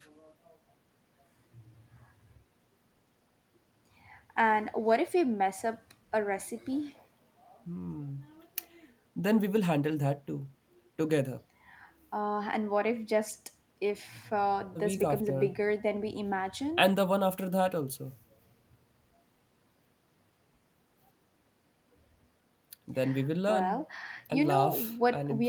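Nothing in this speech recording stands out as a technical fault, so there's nothing to flag here.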